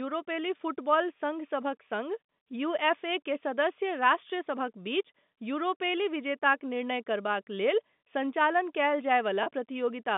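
Packet loss with pitch repetition at 9.43 s, just after "करबाक लेल सञ्चालन कयल": about 30 ms went missing, and repeating the last pitch period bridged it, giving a brief held buzz.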